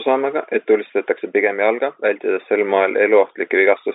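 No technical faults can be heard in the speech, which carries the narrow band of ordinary G.711 telephone coding, roughly 250 Hz to 3.7 kHz.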